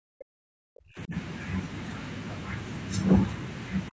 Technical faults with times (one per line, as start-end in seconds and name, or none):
0.00-1.14 speech suppressed in double talk
3.89-4.00 speech suppressed in double talk